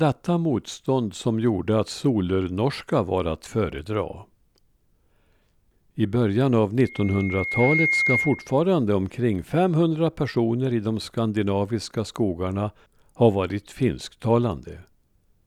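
Speech with a loudspeaker feedback squeal from 6.84 to 8.64 s, right after "I början av": a tone at 2.1 kHz swells over about a second to roughly 5 dB above the speech. The mic is hearing its own loudspeaker, and the loop gain at that frequency has tipped past one.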